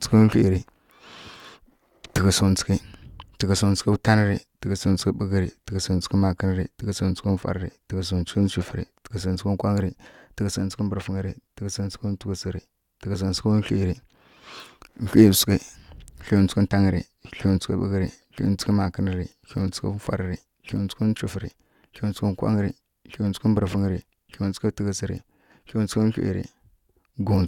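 No technical faults can be heard anywhere in the recording; the speech signal stays steady and intact throughout.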